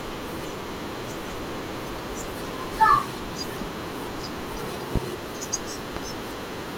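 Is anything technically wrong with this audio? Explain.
Yes. The speech carries two loud pops, the first from 4.96 to 4.99 s and the second from 5.97 to 6.00 s. The first peaks about 20 dB above the speech and the second about 15 dB. Each is a single sharp thump over the speech, which continues underneath. The likely cause is a sudden voltage pulse, from a plug, switch, static or driver glitch, shaped by the following circuitry. On the waveform each is a tall narrow spike. On a spectrogram each is a thin bright vertical stripe spanning all frequencies.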